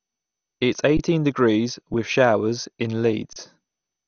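Throughout, the speech sounds dull and gurglingly granular, with nothing above 6.5 kHz. That likely comes from MP2 compression around 48 kbps, which switches off upper sub-bands and coarsely quantises the rest.

At 0.97 s, at 1.94 s, and from 3.33 to 3.36 s, the sound briefly freezes flat and resumes softly without skipping material: an underrun with held sample, where the converter held its last value.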